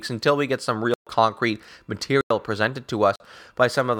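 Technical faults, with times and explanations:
0.94–1.07 s, 2.21–2.30 s, 3.16–3.20 s, block of digital silence: the speech drops abruptly into dead silence for 128, 95 and 43 ms, first just after "until we get some". Buffers likely went unfilled and were zeroed; the last gap fits a 2048-sample buffer.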